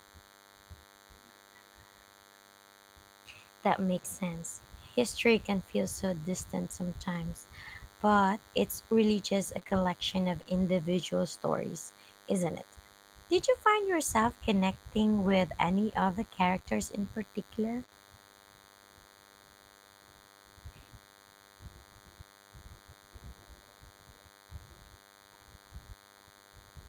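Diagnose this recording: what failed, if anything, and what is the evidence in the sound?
A DECT cordless phone buzz runs through the whole recording. It is a thin, steady buzz at 100 Hz with a dense stack of harmonics. It sits roughly 30 dB below the speech. The stage is analogue wiring. A nearby DECT handset or base fires a radio burst every 10 ms. Some part of the audio circuit rectifies those bursts. That turns the 100 Hz burst rate into an audible tone and its harmonics.

Two lost packets were rebuilt from error correction. The first runs from 3.97 to 3.99 s. The second runs from 5.13 to 5.15 s, just before "can feel so distant". Each is 20 ms long and sounds briefly rougher and noisier than the speech around it. There is no gap at either point. The stage is the network, with recovery in the codec. Each packet was lost. The next packet carried a low-bitrate copy of it, and the decoder played that copy.

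Scattered short gaps appear in two stretches. The first runs from 9.59 to 10.47 s, after "it's really just a". It holds about three holes totalling 60 ms. The second runs from 15.25 to 17.93 s, after "you find yourself connecting". It holds about four holes totalling 80 ms. Each hole is short, around 20 ms at most. Each is heard as a tick, smear or hiccup. The stage is the network. Packets arrived late or not at all, and the receiver filled each hole by extending the previous sound.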